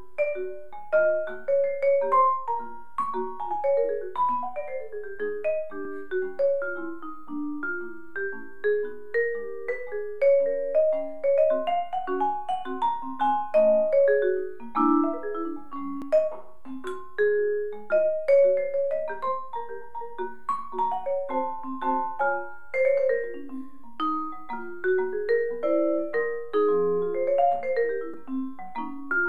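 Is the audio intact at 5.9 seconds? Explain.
No, a repeated buffer at 5.85 s replays a 5 ms block once, causing a click or brief buzz: a vertical spectrogram line and a duplicated waveform segment with a hard join.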